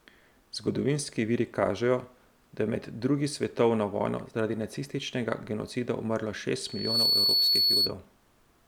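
A loudspeaker feedback squeal starts at 6.65 s, just after "zaradi nacističnega genocida umrlo": the microphone is picking up the loudspeaker it feeds, and at 4.4 kHz the gain around that loop climbs above one. That single frequency then feeds on itself, swelling over roughly a third of a second into a piercing whistle that sits about 5 dB above the speech and rings on until 7.94 s.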